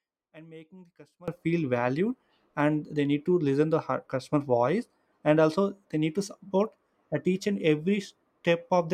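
From the start to 1.28 s the speech shrinks to a faint residue about 23 dB down, with the centred voice and low end nearly gone. The likely cause is one channel inverted: with reversed polarity, the content common to both channels cancels when summed.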